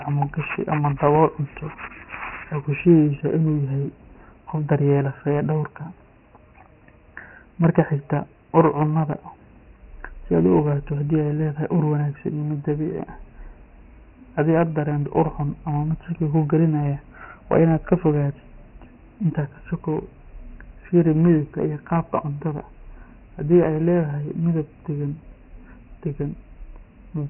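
Throughout the speech, the audio has been squeezed through Dialogic VOX ADPCM, the OKI-style 4-bit adaptive coding used for phone menus and voicemail. The band stops dead at 3 kHz, which fits a 6,000-sample-per-second rate and about 24 kbps. With only four bits per step, the coder's guesses lag the waveform, so heavy damage shows as a gritty, granular hiss riding on every syllable and a dull, boxed-in, telephone-thin tone.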